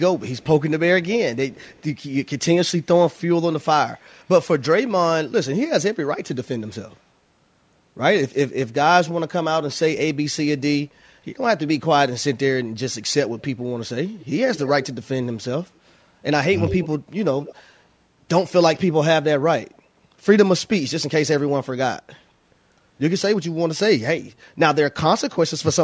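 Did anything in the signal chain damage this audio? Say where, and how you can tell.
Yes, there's an echo leak from the call processing. A delayed copy of the speech trails the talker at 0.37, 1.53–1.83, 14.19, 14.55–14.95, 16.56–16.88 and 17.42–17.62 s, lagging by roughly 170–180 ms. Early on it's buried at about -35 dB, but around 16.6 s it climbs to about -10 dB. That's likely a far-end loudspeaker echo the canceller didn't fully subtract, so the residue got sent back down the line.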